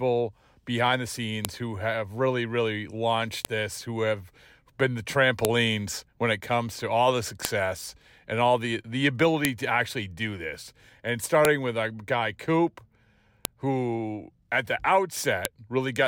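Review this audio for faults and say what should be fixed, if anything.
A sharp, loud snap cuts through the speech at 1.45, 3.45, 5.45, 7.45, 9.45, 11.45, 13.45 and 15.45 s, for example right after "have really really launched" and just before "this who have been", after "comes to all the", and before "who at the". It is a file header played as audio: the stream is built from 2-second WAV pieces joined with their headers intact, so each piece opens with a few dozen header bytes played as samples, producing a click every 2 s regardless of the speech. To prevent it, strip each piece's header and concatenate only the raw sample data before playback or export.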